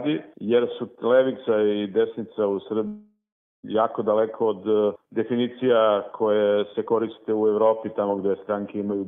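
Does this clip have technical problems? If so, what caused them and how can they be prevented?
Yes. From 2.87 to 3.65 s there's a long network dropout. The audio stops arriving, and the receiver stretches the last bit into a fading buzz or hiss that dies down to about 0.44 s of near-silence. Then the sound picks up again with 0.76 s simply gone. The cause is likely a stall in packet delivery that ran longer than the receiver could cover. A steadier connection or a larger jitter buffer would help prevent it.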